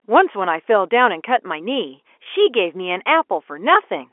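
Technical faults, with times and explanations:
2.24–2.26 s, packet loss with last packet repeated: a 20 ms stretch, fitting one lost packet, is filled by replaying the previous one, so it sounds like a small blip instead of falling silent.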